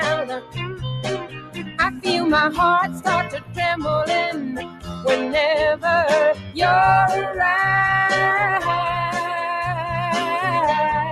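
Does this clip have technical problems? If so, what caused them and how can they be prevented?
Yes. A noise suppressor applied to music or sounds runs through the whole clip. A speech-tuned suppressor treats steady tones and tails as noise, so level swings by around 10 dB and the sound pumps. On a spectrogram, sustained bands flicker and fade early while onsets stay bright. To prevent it, bypass speech noise suppression for non-speech material.

Sound cut by the noise suppressor appears at 0.39–0.85, 1.17–2.07, 2.87–3.06, 3.23–3.59, 4.32–5.05 and 6.34–6.58 s, with the deepest drops about 12–14 dB. Held or decaying passages sink there. The waveform envelope visibly sags while transients keep their height. Disabling the suppressor, or using a music mode, would prevent these dips.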